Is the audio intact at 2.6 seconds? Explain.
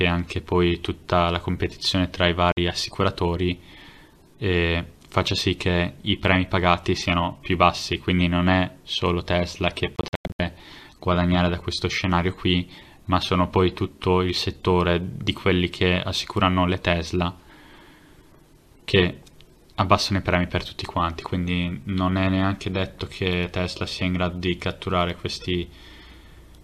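Yes, but only just: a digital broadcast dropout silences the sound from 2.52 to 2.58 s, where the receiver muted on failed frames, likely about two. The waveform shows a flat 50 ms gap, and the spectrogram a narrow blank vertical band.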